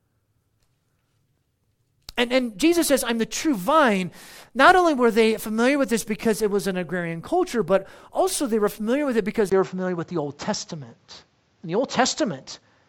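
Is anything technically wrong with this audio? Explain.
Yes. At 9.50 s, after "familiar with it because", the input likely switched to a poorer device: a 20 ms gap, then audio capped near 7.6 kHz, duller, shifted about 5 dB in level, over faint new background noise.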